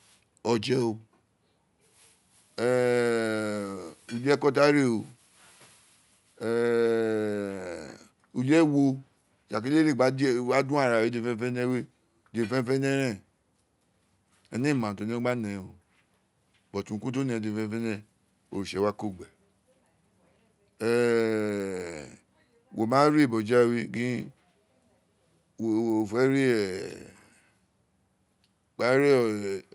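From 11.4 s onward, the resampler restarted on every block. Each 100 ms block edge ticks at 10 Hz, showing as evenly spaced vertical spectrogram streaks.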